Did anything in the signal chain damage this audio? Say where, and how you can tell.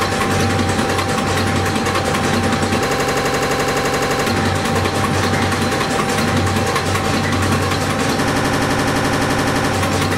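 Yes, at the driver or buffer stage: a system hang loop at 2.90–4.27 s and 8.28–9.73 s. One 85 ms slice repeats exactly at 11.7 Hz, a machine-gun stutter fitting a frozen 4096-sample ring buffer. Identical repeats, not decaying concealment, rule out network loss.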